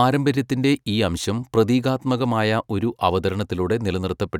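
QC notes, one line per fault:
Nothing stood out on listening to the speech.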